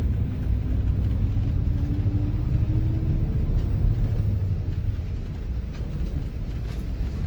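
Throughout, the sound has a swirly, smeared, hollow quality and blurred attacks, more than a 48 kbit/s Opus stream alone would give, with content reaching about 20.4 kHz. Generation loss is the likely cause, from around seven Opus re-encodes, each quantising on a shifted frame grid.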